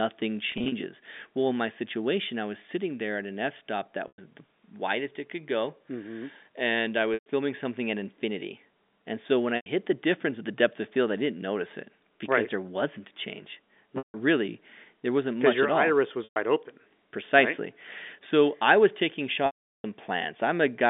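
Speech heard through a telephone band of roughly 200 Hz to 3.6 kHz. Packet loss with pitch repetition occurs at 0.52, 4.08, 7.14, 9.56, 13.98, 16.24 and 19.46 s. Each gap is filled by repeating the last pitch period. Most are losses of 100 to 160 ms. The 19.46 s loss lasts 0.38 s and fades to silence.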